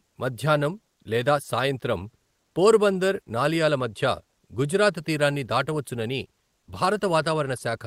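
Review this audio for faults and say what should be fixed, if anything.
Comfort noise in place of the background from 6.59 to 6.67 s: the real background, about 49 dB below the loud parts, becomes steady, featureless noise about 10 dB quieter, likely from Opus DTX. A spectrogram shows a smooth, flat patch in the textured floor. Disabling DTX prevents it.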